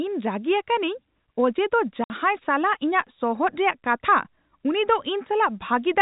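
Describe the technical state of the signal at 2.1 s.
At 2.1 s the speech is resuming after a gap from packet loss filled with silence. From 2.04 to 2.1 s, 60 ms of sound is missing. That fits two lost 30 ms packets. The receiver played silence there, and the gap has abrupt edges.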